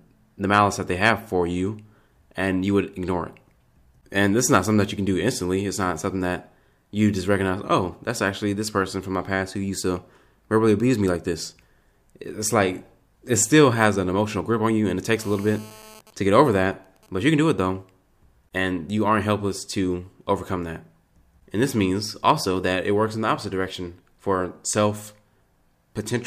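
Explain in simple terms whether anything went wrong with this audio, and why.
GSM phone buzz, from 15.19 to 16.0 s, just after "on you and it": a nearby 2G mobile phone on a call was sending radio pulses 217 times a second. The recording circuit picked them up and turned them into a harsh, raspy buzz unrelated to the speech.

GSM signalling bursts, from 16.0 to 17.33 s, just before "do it though": the same phone, with its user silent during the call, sent only short groups of pulses. These were heard as even ticks with a longer buzz twice a second.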